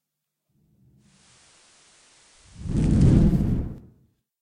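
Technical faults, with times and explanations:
0.96–3.47 s: digital radio blending to analogue; a 343 ms cross-fade to the FM feed adds faint hiss at unchanged level, then blends back.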